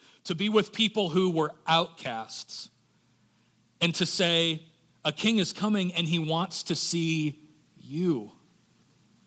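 A speech clip with one brief lost packet rebuilt from error correction, at 1.85 s. For about 20 ms the sound turns rough and noisy, but there is no gap or dropout. One packet went missing. The next packet carried a low-bitrate copy of it, and the decoder played that copy. The detail is coarser. Nothing above 8 kHz is present, which fits an Opus call path at about 24 kbps.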